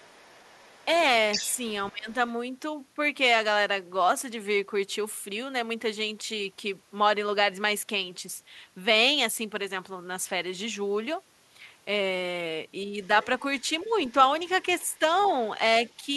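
Other side's voice leaking through, 0.00 to 1.58 s: a second voice runs underneath the talker, only about 15 dB below. The likely cause is an echo canceller that failed to remove the far end's voice after the talker's loudspeaker played it into the microphone. It returns far more faintly from 13.03 to 15.30 s, about 30 dB down, and as a brief scrap at 15.86 to 15.96 s, about 40 dB down.

Speech suppressed in double talk, 1.91 to 2.09 s: the talker's voice sinks by around 15 dB for roughly a fifth of a second. It happens likely because both sides spoke at once and the echo canceller, unable to separate its own talker from the loudspeaker echo, turned everything down. Shorter, shallower dips follow at 12.85 to 12.97 s (about 5 dB) and at 13.84 to 13.91 s (about 10 dB), each a quick duck in level.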